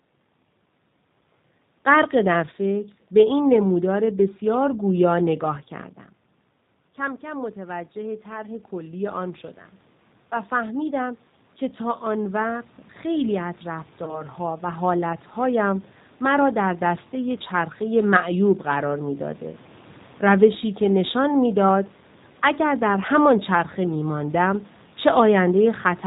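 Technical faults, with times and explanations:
Throughout: G.729 codec. The speech passes through an 8 kbit/s G.729A voice codec that rebuilds each 10 ms frame from a vocal tract filter, a pitch predictor and a few pulses, discarding everything above 4 kHz, so the voice sounds plainly muffled, rough and synthetic.
6.97 to 19.47 s: automatic gain rising. The input dropped by about 14 dB, roughly when the talker moved back from the microphone around 6 s, and the gain control responded by climbing about 15 dB over twelve seconds, so voice and room noise swell together slowly.
14.04 to 14.23 s: VoIP packet loss concealed by the speech codec. One 30 ms packet went missing and the decoder filled the gap by extending its last pitch and filter with fading gain, giving a brief buzzy smear, and the voice stays weakened for a while after.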